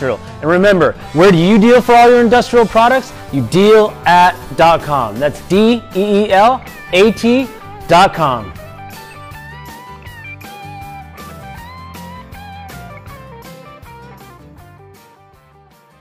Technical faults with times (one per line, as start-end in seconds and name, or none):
none